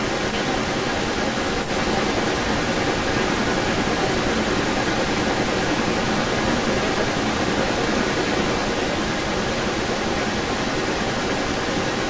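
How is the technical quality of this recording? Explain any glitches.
The recording has an audible echo leak throughout. From 0.0 to 12.1 s, the speech is trailed by a delayed copy about 320 ms later, roughly 10 dB louder than the speech. This likely comes from a loudspeaker on the far end whose echo canceller let its microphone's pickup be sent back.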